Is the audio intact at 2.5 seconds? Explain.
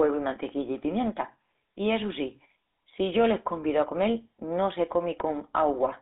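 No, at 2.5 seconds you're hearing GSM full-rate codec damage, and it runs through the whole clip. The codec rebuilds speech from a vocal-tract model driven by sparse regular pulses, which fits a 13 kbps rate, so it sounds buzzy and gravelly, squeezed into roughly 200 Hz to 3.7 kHz.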